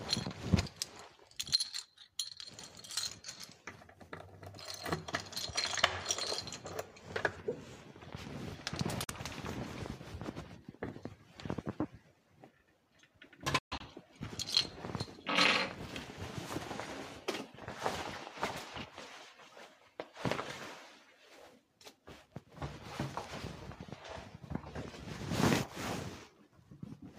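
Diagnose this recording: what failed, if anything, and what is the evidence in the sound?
The sound cuts out twice: a short hole from 9.04 to 9.10 s, about 43 ms of missing audio, then a broken stretch from 13.58 to 13.82 s where about 149 ms goes missing across roughly 213 ms, the longest gap lasting 128 ms. Each time, the sound resumes further along, as if it had kept playing. The likely cause is a Bluetooth dropout at the playback link, with packets arriving too late and being discarded. The gaps fit the loss of a couple of frames, then about seven.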